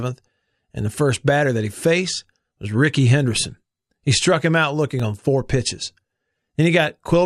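Periodic USB or driver dropouts run from about 5.0 to 7.0 s, just after "struck him out": every 0.5 s, roughly a millisecond of speech vanishes into silence as the USB bus or audio driver stalls, leaving about five evenly spaced ticks heard only against the signal.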